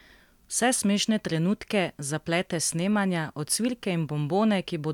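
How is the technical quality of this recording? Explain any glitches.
No glitches or technical faults can be heard here.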